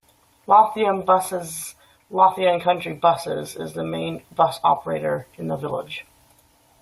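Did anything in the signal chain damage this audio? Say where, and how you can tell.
No, nothing in the chain from capture through playback leaves an audible mark on this speech recording.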